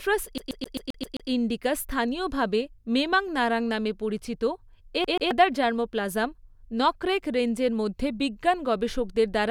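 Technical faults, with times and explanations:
0.38–1.30 s, CD stuck on one turn: a rapid, even stutter repeats a 131 ms slice seven times with brief mutes, as the laser jumps back one track, before "ইন্ডিকা স্থানীয়ভাবে মেমাং নারাং".
5.04–5.31 s, CD stuck on one turn: the same 131 ms slice-and-mute stutter plays twice from the skipping disc, before "জার্মোপ্লাজম নকরেক রেঞ্জের".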